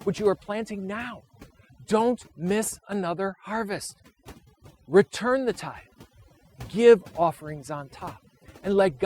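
Speech throughout shows overdone noise removal: bands sitting near the estimated noise floor are pulled down hard, so the background drops and breaks up into twinkling specks and quieter voice components vanish. Unlike a plain low-bitrate codec, the artefacts cluster where signal approaches the noise level.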